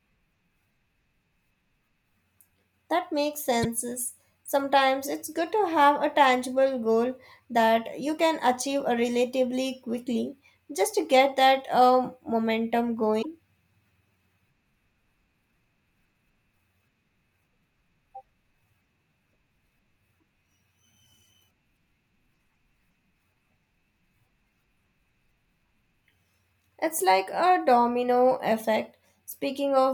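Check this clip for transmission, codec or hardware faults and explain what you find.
Two short faults, both damaged data in a compressed stream. The first runs from 3.63 to 3.65 s. The second follows "get that um momentum" at 13.19 to 13.25 s. Corrupted bytes there make the decoder misread frames and lose sync, producing a brief chirp, squawk, click or short hole.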